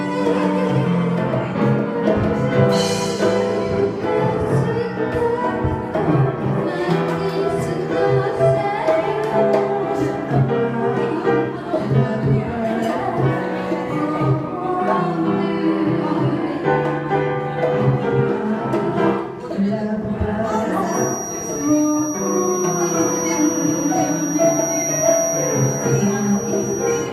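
A feedback whistle starts at 20.83 s and runs to the end: a thin, steady tone near 5.8 kHz, roughly 10 dB below the sound, swelling and fading slowly in level. It is likely a speaker-to-microphone loop poised just short of runaway, ringing at one frequency.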